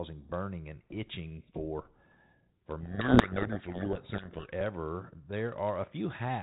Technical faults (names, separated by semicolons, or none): codec payload misread